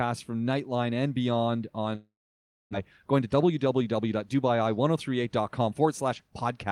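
Speech, with two faults close together. Right after "and beyond", from 1.95 s to 2.75 s, the sound breaks off. The last sound is stretched into a fading buzz or hiss, and then about 590 ms of silence follows. When the speech returns, about 600 ms of it is missing. This is most likely a long network dropout, with the receiver filling the gap with concealment. It differs from a plain mute or an edit because of the smeared tail before the silence and the jump forward in the speech, which points to a delay shift of around 150 ms. From 3.03 s to 4.49 s the speech then runs at 110% speed, hurried but at unchanged pitch. This is a jitter buffer speed-up: to work off the extra delay, the receiver cuts out short pitch-period pieces again and again, about 150 ms in total. Because the pitch stays the same, this is not a tape-speed or resampling error, where pitch and tempo would rise together.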